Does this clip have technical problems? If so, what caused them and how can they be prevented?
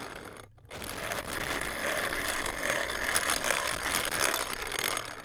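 Yes, loose connector crackle at 0.73–1.67 s and 3.72–4.20 s: a worn contact intermittently breaks, chopping the signal into scratchy bursts, seen as irregular spikes and vertical broadband streaks. Clean or replace the connector and secure the cable against movement.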